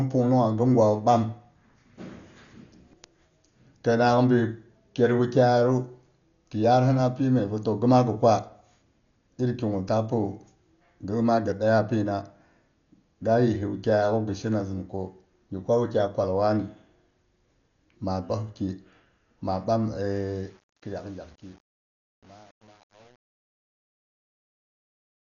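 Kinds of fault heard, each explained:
Dolby Digital compression: The speech sounds dull and muffled from start to finish, with nothing above about 6.9 kHz, and a rough, fluttering noise clings to tonal parts of the sound, showing heavy coding damage. This is likely Dolby Digital compression at a low rate, consistent with about 48 kbps. The encoder narrows the band and leaves many frequency lines without mantissa bits, and the decoder fills those lines with dither noise in place of real detail.
truncation distortion on a fade: From 20.34 s, just after "ma ɓam", the fade-out toward 25.36 s turns gritty. From about 20.59 s to the end, the quiet tail is at its roughest instead of dying away cleanly. The level stage keeps too few bits, consistent with 8-bit resolution, and adds no dither. As the signal approaches the smallest step, the waveform collapses into a few coarse square steps.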